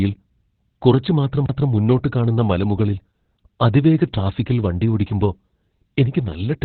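Opus voice compression, throughout: the codec's narrowband linear-prediction mode removes everything above 4.5 kHz and coarsely codes the excitation, so the speech sounds muffled, hoarse and slightly robotic, pointing to roughly 8 kbps.

CD skip, 1.46 to 1.49 s: the laser jumped to another turn of the spiral, leaving a brief mute before playback resumes from a different place.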